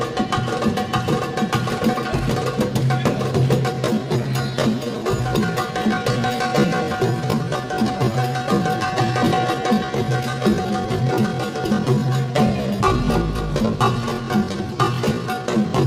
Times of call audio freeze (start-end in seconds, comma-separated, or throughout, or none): none